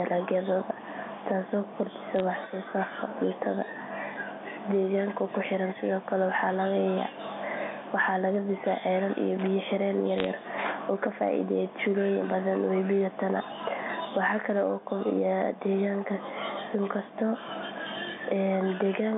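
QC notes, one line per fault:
Throughout, gain pumping. The room noise sits about 37 dB under the speech. The level swings by about 15 dB. The likely cause is an input gain set far too high, with a fast limiter or compressor clamping down on each peak. That makes loud and soft passages sit close together, so the speech sounds squashed.
2.16 to 2.20 s, just after "taasoo kordhisa", and 10.18 to 10.27 s, bit errors on a digital phone line. Short clusters of sharp ticks and crackle sit on top of speech that is otherwise intact. Each flipped bit corrupts a single sample on the mu-law telephone line. Hits on an upper bit, or on the sign of a loud sample, throw that sample far off, which gives a click. The second cluster is denser, which fits one more damaged frame.
9.39 to 9.47 s, just after "ceelal iyo", loose connector crackle. A brief, irregular burst of scratchy crackle lasts under a tenth of a second. 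It behaves like a worn or dirty contact that makes and breaks rapidly when it is disturbed. The signal is chopped on and off in quick succession. Any DC on the line adds pops at each break. That is why it sounds ragged rather than like clean ticks.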